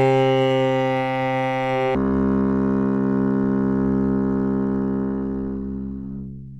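Section at the wrong speed from 1.95 s to the end: playback drops to 0.511 times speed, likely a clock mismatch, so the sound turns slow and deep, roughly ten semitones lower.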